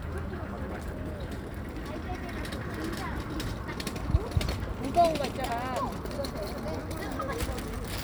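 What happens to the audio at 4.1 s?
Nothing goes wrong at 4.1 s: the sound carries on intact through that moment, with no dropout, click or distortion to be heard.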